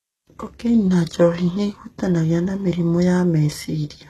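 Speech, marred from start to finish by plainly audible HE-AAC compression damage, likely from a very low bitrate in the region of 16 kbps. The treble is synthetic rather than recorded: upper bands copied from lower ones and shaped coarsely, so s sounds come out gritty and lispy. A spectrogram would show a hard ceiling at 12.3 kHz, with the band below it filled by smeared, repeated-looking texture that lacks the original harmonic detail.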